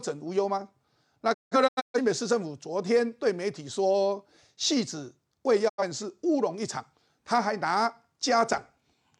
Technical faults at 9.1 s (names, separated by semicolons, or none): none